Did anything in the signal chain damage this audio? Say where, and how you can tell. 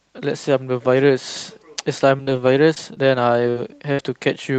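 Yes. The network stage damaged it, in three kinds of fault.

From 2.17 to 3.56 s there is repeated packet loss with a robotic sound. Five short gaps break the speech, none longer than 41 ms. Each hole is filled by stretching the last sound, so the stretch turns choppy. About 10 percent of that span is concealed. Roughly 200 ms ends up rebuilt, while 140 ms of real speech never arrives.

At 3.92 to 4.00 s comes a burst of packet loss. About 60 ms goes missing in one run. The receiver holds the last sound and fades it, giving a brief buzz or hiss. The speech then resumes slightly further on. The part in between is simply gone, so the jump gives the loss away.

At 3.98 s one 20 ms frame is a lost packet rebuilt from error correction. The next packet carried a low-bitrate spare copy, and the Opus decoder played it. So there is no gap here, just a short rough, noisier patch. The call path itself runs Opus with an 8 kHz bandwidth. 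That leaves little top end to dip, so the roughness is what stands out.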